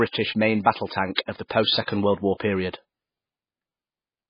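Throughout the speech, nothing is present above 5 kHz and the sound is watery and swirling, with smeared consonant onsets. The likely cause is heavy MP3 compression at a bitrate near 16 kbps, which removes treble and lets weak spectral lines flicker between frames.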